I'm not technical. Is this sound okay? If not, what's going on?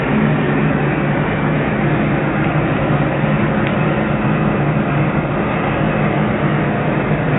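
Yes, there are no problems.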